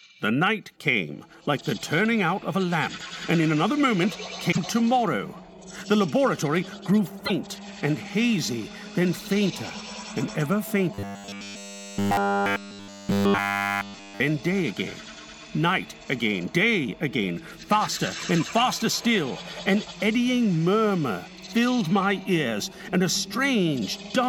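At 4.51 to 4.58 s and 7.25 to 7.31 s, the sound skips ahead with a brief chirp or noise burst, likely a broken MP3 bit reservoir, where frames after a cut look back for their data and find bytes of another frame. Unlike a plain dropout, each glitch garbles roughly two or three following frames.

From 10.94 to 14.20 s, the sound turns into a rigid, metallic 100 Hz buzz, likely robotic sound from repeated short buffers: a roughly 10 ms chunk is replayed continuously. Unlike a stutter, the fixed pitch persists throughout.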